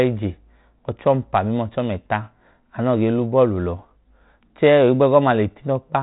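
Nothing goes wrong anywhere in this speech, which has the narrow telephone band topping out around 4 kHz and the faint grain you'd expect from G.726 running at its usual 32 kbit/s.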